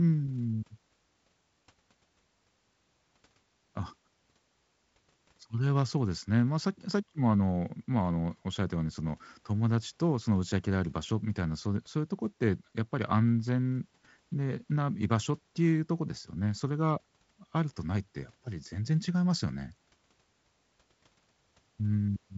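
No technical faults can be heard anywhere in the recording. The speech carries the character of G.722 wideband telephone coding at 48 kbit/s, with nothing above about 7.7 kHz and only a light, faint grain from the coding.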